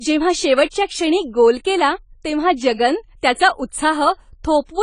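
From the start of the speech to the end, nothing is present above 10 kHz, and the codec damage is plainly audible. The sound is dull and smeared, with a warbling or fizzy texture on sustained sounds and sibilants. The likely cause is AAC compression (AAC-LC) at a low bitrate, which fits a rate of about 24 kbps. Quantising each frame's frequency lines against a hearing model at that rate lowers the cut-off and removes or replaces spectral detail. On a spectrogram, a flat ceiling sits at 10 kHz, and the energy beneath it looks patchy rather than continuous.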